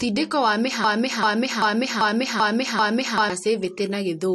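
At 0.84 s the speech catches in a broken-record loop: one 0.39 s fragment repeats back to back six times until 3.30 s. The player or stream likely stalled and kept resending its last chunk, so the audio meant for that stretch is lost.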